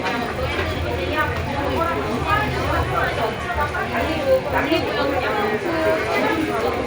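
Resampler restarted on every block, from start to finish: the audio appears to have been converted from 24 kHz to 48 kHz in separate 10 ms chunks, each treated as if nothing came before or after it. At every chunk boundary the converter worked from missing or wrong neighbouring samples, leaving a small error at each edge. Repeating 100 times a second, these errors merge into a steady 100 Hz buzz that rides on the sound and disappears in its quiet gaps.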